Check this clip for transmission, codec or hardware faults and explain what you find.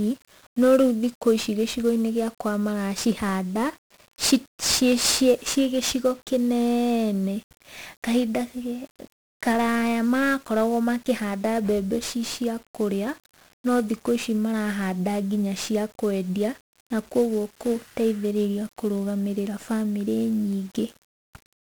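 The speech has been through 1-bit DFPWM compression for its whole length, with heavy damage. Each sample nudges an adaptive level up or down, which fits roughly 48 kbps, leaving constant fuzz, crackle and hiss that buries the treble.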